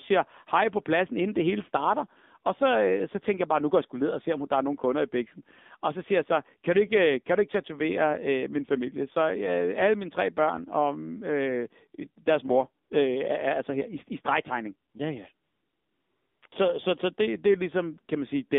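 Throughout the speech, the AMR narrowband mobile codec confines the sound to a telephone band of roughly 200 Hz to 3.6 kHz. Its plainly audible buzzy, synthetic edge fits a low 7.4 kbps mode. The codec rebuilds the voice from a vocal-tract model excited by a few pulses per subframe, so the damage is coded texture and not just lost treble. That is what separates it from a simple low-pass filter, which would muffle the voice but leave it natural.

AMR comfort noise appears four times. Each time, no speech frames arrive and the receiver fills the gap with smooth synthetic noise built from a coarse estimate of the background. The first gap runs 12.84 to 12.90 s, 60 ms, just after "og øh deres mor". The second runs 14.90 to 14.94 s, 40 ms, after "her i i stregtegning". The longest stretch runs 15.34 to 16.42 s, about a second. The last runs 16.48 to 16.52 s. Unlike a dropout or noise gate, these gaps never fall to dead silence. 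A steady, even hiss switches in and replaces the real room sound.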